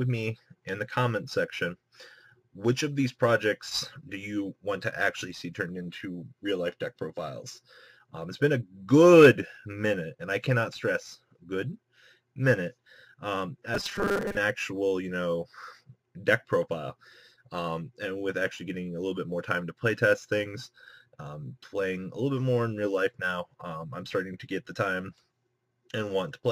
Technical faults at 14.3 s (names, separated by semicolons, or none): robotic sound from repeated short buffers